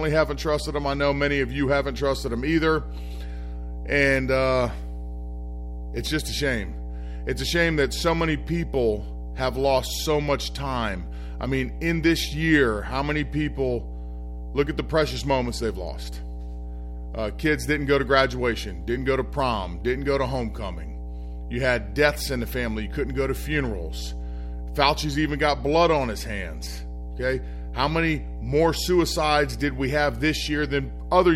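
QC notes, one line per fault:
Throughout, mains hum: a steady 60 Hz tone from power-line coupling sits only about 10 dB below the speech, pitched and constant, unlike broadband rumble.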